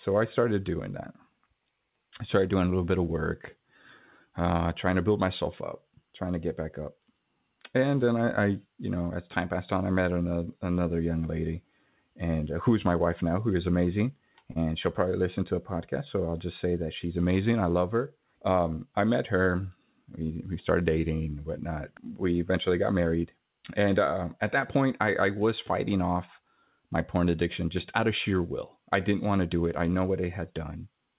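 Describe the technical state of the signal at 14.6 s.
A brief smear at 14.52–14.57 s, after "now who is amazing": short concealed packet loss, where 40 ms never arrived and the receiver extended the preceding sound to fill the gap.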